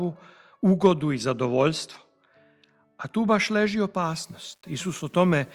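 Low bit depth without dither runs from 4.03 s to the end of the clip. The audio takes on a grainy distortion whose error sits at roughly 40 dB below the signal and moves with it rather than forming an independent noise floor. The likely cause is requantization to about 9 bits by plain rounding, with no dither to decorrelate the error. Any detail smaller than one step either vanishes or flickers between adjacent levels.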